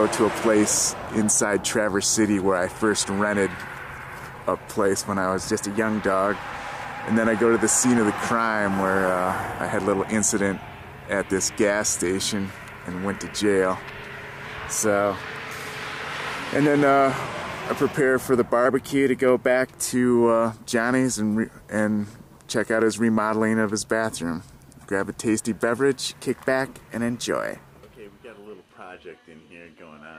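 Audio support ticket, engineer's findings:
Drift correction step, four times: 5.44–5.99 s, 14.45–16.68 s, 18.66–19.92 s, 25.94–27.59 s. Sound speeds up 6.2% and rises 104 cents, about a semitone. Snaps back at each end. Likely a clock-sync resampler. It jumps playback rate in one step to drain or refill its buffer. Speed and pitch move together. No gradual slew.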